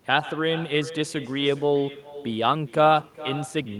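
From the start of the clip to its end, the speech carries an echo with no canceller. The far end is playing the call through a loudspeaker, its microphone picks that playback up, and nothing subtracts it before it is sent back. After the network round trip, roughly 0.4 s, each phrase returns as a second copy about 15 dB below the direct speech. That copy sounds thinner, trailing every syllable like a faint repeat.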